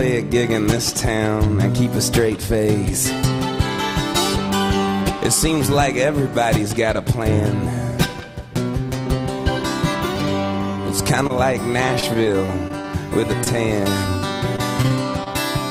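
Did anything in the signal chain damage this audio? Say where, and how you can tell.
Yes, the damage happened in the network stage, before the decoder. The first symptom is short concealed packet loss: at 11.27 to 11.31 s and again at 13.44 to 13.48 s you get a quick smear, a little wobble. Each one fits roughly 20 ms of audio arriving too late to play. The receiver papered over the hole by stretching the last bit of sound for about 20 to 26 ms and then crossfading back into the real stream.

The worse stretches are repeated packet loss, which gives that choppy, robotic sound. From 12.00 to 12.86 s it sounds like about six separate holes, each no more than around 21 ms. Roughly 110 ms gets patched, about 13% of that span. From 14.56 to 15.28 s there are about four more holes with around 80 ms concealed. The drops come so close together that the concealment keeps re-synthesising from stale material before it can recover, and that is where the chopped-up quality comes from.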